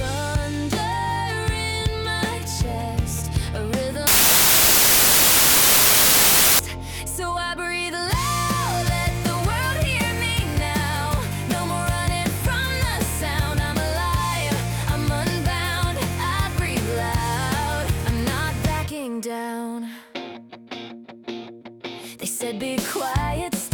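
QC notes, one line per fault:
4.07–6.59 s, wrong sample width: 32-bit samples read as packed 24-bit scramble bytes across sample boundaries, giving loud hash with the sound buried, slowed to 0.75x and lower in pitch. The waveform becomes a dense block, and the spectrogram shows broadband noise over faint, downward-shifted structure.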